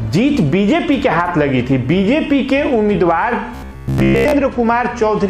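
From 3.55 to 4.33 s there's robotic sound from repeated short buffers: a rigid 66.7 Hz buzz, likely from most of the audio being a looped 15 ms chunk.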